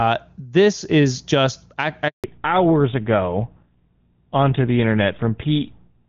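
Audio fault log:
2.08 to 2.24 s, handover gap: the call gets passed from one network to another here, and for 160 ms no speech frames come through at all. The sound fades out within a few tens of milliseconds and then there's dead silence until the new link picks up, so whatever was said in that stretch is simply gone. It's a clean hole rather than a glitch, which is what you'd expect when the frames never arrive.
2.24 s to the end, fallback to narrowband: right after the gap the call comes back on an older narrowband codec, GSM full rate at 13 kbit/s, and nothing above 4 kHz survives from then on. Up to that point the HD Voice link was running AMR-WB at 23.85 kbit/s with little or no audible codec damage; now the top end disappears and the speech turns duller, boxier and a bit rougher.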